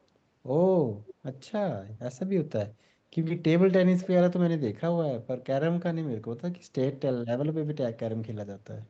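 Echo leak at 1.06 to 1.14 s and again at 4.00 to 4.08 s: a faint, delayed copy of the speech, roughly 20 dB down and trailing by 0.3 s, briefly surfaces. This is likely sound from a loudspeaker on the far end that its echo canceller failed to remove.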